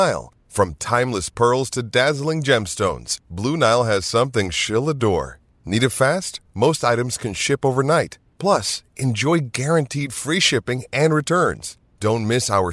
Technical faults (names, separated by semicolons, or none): none